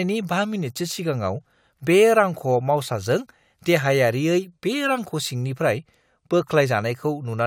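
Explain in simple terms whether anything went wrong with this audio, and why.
Nothing went wrong that a listener would notice: on listening, the speech comes across clean, with nothing that stands out as a problem.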